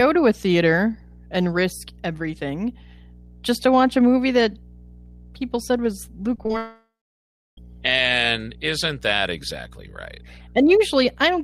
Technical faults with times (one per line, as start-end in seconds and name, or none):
0.00-11.43 mains hum
6.36-6.54 repeated packet loss (robotic sound)
6.57-7.58 long network dropout